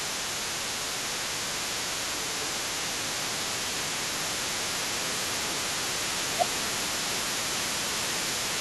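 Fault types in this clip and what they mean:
Other side's voice leaking through: There's a second voice sitting under the main talker for the entire clip, around 15 dB quieter. It's most likely the far end playing out of a loudspeaker on the talker's device and getting picked up again by the microphone, with the echo canceller leaving a good chunk of it in. So you're hearing both ends of the conversation on what should be one side.
Speech suppressed in double talk: The main talker keeps ducking in level at 0.1–0.29 s, 1.39–2.58 s, 3.23–4.31 s, 4.73–5.8 s and 6.33–7.76 s. The first and third dips are light, about 5 dB. The second and fifth go to about 15 dB, and the one around 4.7–5.8 s is deepest, near 20 dB. The likely cause is the echo canceller failing to separate the talker from the loudspeaker echo while both sides spoke, so it pulled everything down together.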